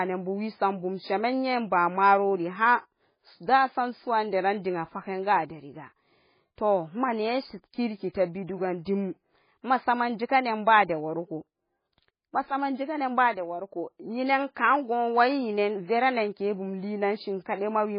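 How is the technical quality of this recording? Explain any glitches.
The recording is heavily degraded throughout. The speech sounds watery and swirly, with a dull, muffled top and smeared consonant onsets, and nothing is present above 5 kHz. This is likely heavy MP3 compression at a very low bitrate, around 16 kbps. Starved of bits, the encoder cuts the treble at a fixed point and drops weaker frequency lines that flicker on and off between frames, producing the warbling texture and chirpy s sounds.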